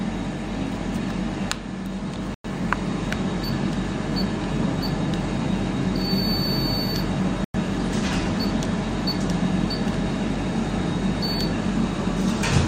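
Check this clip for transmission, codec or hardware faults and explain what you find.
Two hard-edged silences interrupt the sound, both caused by a gap between chunks. The audio arrived as 5-second chunks and silence was left at each join, inserting 100 ms of silence from 2.34 to 2.44 s and from 7.44 to 7.54 s without losing anything, so the sound cuts out cleanly and resumes.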